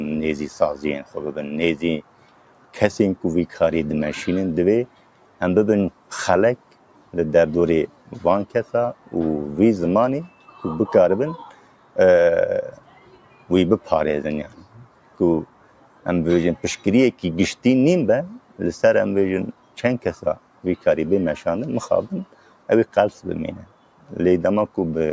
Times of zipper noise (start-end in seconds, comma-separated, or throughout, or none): none